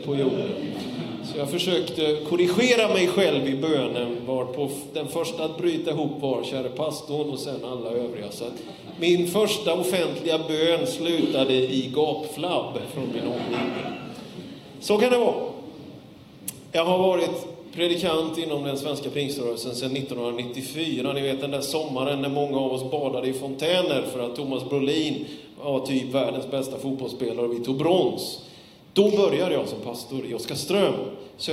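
No technical faults are audible.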